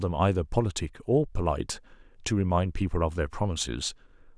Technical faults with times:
none

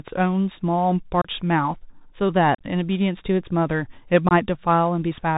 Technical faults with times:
0.00-5.37 Bluetooth CVSD headset codec
1.22-1.29 unconcealed Bluetooth headset packet loss
2.55-2.61 unconcealed Bluetooth headset packet loss
4.29-4.33 unconcealed Bluetooth headset packet loss

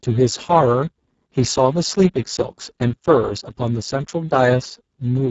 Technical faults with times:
0.00-5.30 Speex codec

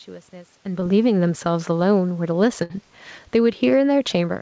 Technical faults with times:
0.80-0.83 short concealed packet loss
2.63-2.71 burst of packet loss
3.20-4.41 automatic gain falling

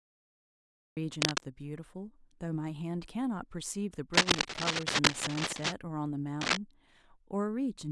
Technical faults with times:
0.00-0.97 cut-off start
1.21-1.40 cable scratch noise
4.13-5.73 cable scratch noise
6.41-6.57 cable scratch noise

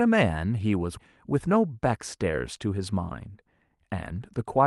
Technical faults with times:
0.97-0.99 skip ahead
1.33-3.45 jitter buffer speed-up

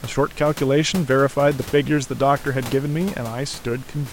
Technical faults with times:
none

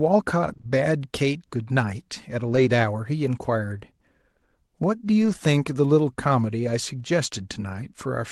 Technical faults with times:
0.45-0.65 repeated packet loss (robotic sound)
2.47-2.61 lost packet rebuilt from error correction
5.21-5.31 lost packet rebuilt from error correction

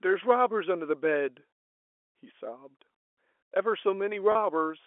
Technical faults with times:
4.32-4.35 packet loss with pitch repetition

